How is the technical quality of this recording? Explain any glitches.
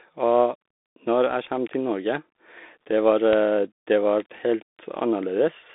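The technical quality is poor: the whole clip has gone through a narrowband headset link, and three separate clicks land in the back half.

Throughout, there's the Bluetooth CVSD headset codec sound. Nothing reaches above about 3.8 kHz and the line sits roughly between 250 Hz and 3.6 kHz, which fits a 64 kbps CVSD link. The one-bit up/down coder can't keep pace with fast high content, so sibilants turn scratchy and a grainy hiss sits under the speech.

Then there are bit error spikes at 3.33 s, 4.20 s and 5.02 s. In each, a flipped bit knocks a sample or two far off value before it snaps straight back, giving a single sharp broadband tick that has nothing to do with the speech around it.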